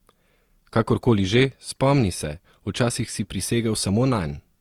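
Across the whole speech clip there is generation loss: a swirly, hollow smear with softened consonant attacks, likely from a few successive lossy re-encodes at a moderate, Opus-like rate. A single low-bitrate pass would sound thinner but cleaner; here the artefacts stack.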